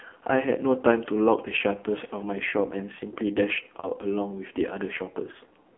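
The whole clip is speech carried through the AMR narrowband mobile codec. Everything sits in a telephone band of roughly 250 Hz to 3.4 kHz, so voices lose their low body and all their air. The coding damage is heavy. Voiced sounds come out buzzy and synthetic, and the harsh, grainy texture points to one of AMR-NB's lowest modes, near 6 kbps. On a spectrogram, energy stops abruptly at 3.4 kHz with empty space above. Harmonics look smeared and blocky from frame to frame rather than smooth.

From 3.80 to 3.88 s there are lost AMR speech frames. The gap lasts 40 ms, which fits two consecutive 20 ms frames failing. The decoder fills the hole by repeating the last good pitch and spectral shape at falling gain, so the sound briefly drags and dips before normal speech resumes a little rough. A shorter loss of 20 ms, a single frame, follows at 5.32 to 5.36 s and is heard as a quick warbling dip. 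On a waveform, both show as short stretches where the envelope sags. On a spectrogram, the harmonics there freeze into flat, fading streaks instead of moving with the speech.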